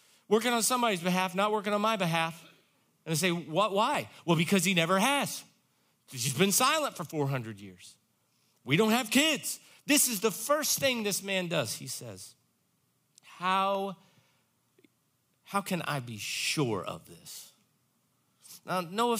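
A single sharp click sounds at 3.95 s and another at 13.75 s. Each is likely dropped samples: a fraction of a millisecond missing, so the waveform jumps. Unlike a dropout, no sound is lost or silenced; only the click remains.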